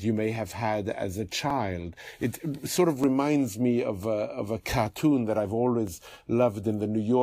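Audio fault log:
1.50 s, 3.04 s, 4.03 s, 4.87 s and 5.87 s, dropped samples: five isolated sharp clicks in the speech, each a thin vertical line across the spectrum. The likely cause is a tiny gap of about 0.7 ms missing from the stream, so the waveform leaps straight to a later value. Unlike a dropout, no audible stretch of sound vanishes, and unlike crackle, the clicks are few, spaced and single.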